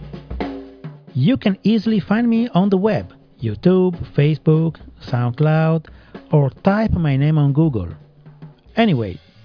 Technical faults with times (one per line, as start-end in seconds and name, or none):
none